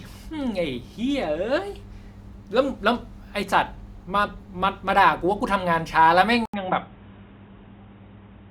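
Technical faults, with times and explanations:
6.46–8.50 s, input switched to a poorer device: after an 80 ms gap the speech turns dull and boxy, with nothing above 3.8 kHz and a new noise floor roughly 35 dB down at an unchanged level, likely a change to a narrower-band microphone or headset profile.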